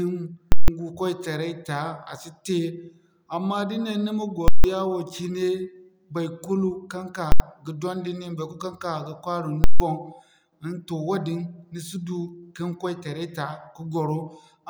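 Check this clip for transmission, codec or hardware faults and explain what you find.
The speech is interrupted four times by invalid numbers at full scale, at 0.52–0.68 s, 4.48–4.64 s, 7.32–7.40 s and 9.64–9.80 s. A calculation in the signal path produced infinite or invalid values, which were clamped to the extreme positive or negative level and held there for a whole block, 160 ms each time except 80 ms at 7.32 s. Each event is a very loud pop where the block starts and another where it ends, with silence between.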